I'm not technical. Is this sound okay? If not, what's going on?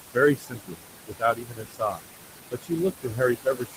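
No. Throughout, there are noise suppressor artifacts: the background noise is pushed down, and what remains of it sinks between the words and rises under them.

There is also speech cut by the noise suppressor, from 0.35 to 0.86 s, 1.07 to 2.1 s, and 2.51 s to the end. Quieter parts of the speech are mistaken for noise and sound swallowed, not merely muffled.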